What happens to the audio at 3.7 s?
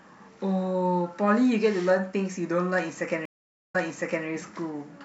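A stream reconnect spans 3.25 to 4.26 s: the connection drops, the speech goes silent for 460 ms, then a fresh decoder resumes 549 ms earlier, repeating audio.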